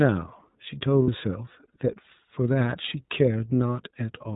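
Speech, carried throughout by the iLBC codec. The band stops at 4 kHz, and there is a plainly audible rough, slightly synthetic edge, which fits the 13.33 kbps mode with 30 ms frames. What separates this from a generic narrowband phone filter is that texture. A simple low-pass leaves the voice smooth but muffled, while here the excitation itself sounds coarsely rebuilt. From 1.02 to 1.09 s there are lost iLBC frames, about 60 ms of missing audio. The decoder fills the gap by repeating the last pitch cycle blended with noise, so it sounds like a briefly held, buzzy-breathy vowel rather than silence or a click. That sets it apart from a plain dropout, which would go quiet. It also differs from concealment in codecs that depend on previous frames, which smear for a while afterwards. Here the voice snaps back to normal right after 1.09 s, because each iLBC frame decodes on its own.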